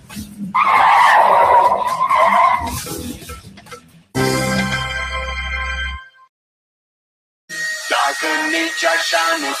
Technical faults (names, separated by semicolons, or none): noise suppressor applied to music or sounds; sound cut by the noise suppressor